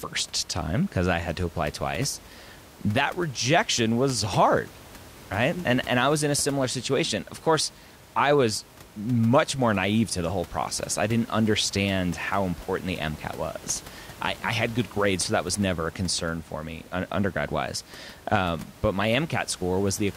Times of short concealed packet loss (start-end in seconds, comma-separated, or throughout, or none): none